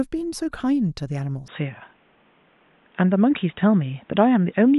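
Input switched to a poorer device at 1.48 s, lasting to the end of the speech clip at 4.79 s. With no gap at the changeover, the sound abruptly turns dull and boxy because nothing above 3.8 kHz survives, the level shifts by around 5 dB, and faint new background noise appears, roughly 40 dB below the voice. The likely cause is the recording switching mid-stream to a narrower-band microphone or headset call profile.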